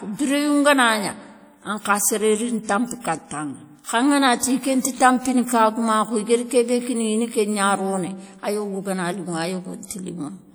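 From start to finish the speech carries a ringing, washy quality, with a hiss that swells and recedes along with the voice and plainly audible damage to its texture. This points to WMA compression, likely a transform encoder using long blocks, which spreads quantisation noise over tens of milliseconds and drops weaker spectral detail. The degree of smearing fits a bitrate around 48 kbps, though the band still extends to about 20.1 kHz.

At 4.82 to 4.85 s a brief hiss runs just ahead of a sharp onset, about 28 ms of noise filling what should be a quiet gap, so the attack itself sounds softened and smeared. This is pre-echo. The attack lands late inside a transform block, and the encoder sizes its noise for the loud part but spreads it evenly across the whole block, so the noise leaks into the silence before the onset.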